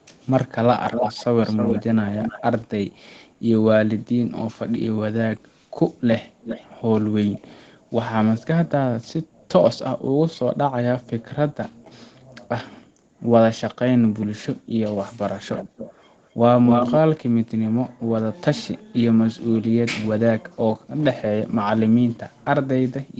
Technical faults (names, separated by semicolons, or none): echo leak